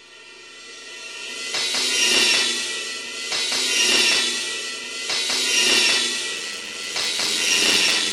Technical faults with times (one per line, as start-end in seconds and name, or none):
6.32-8.12 block size mismatch (padded)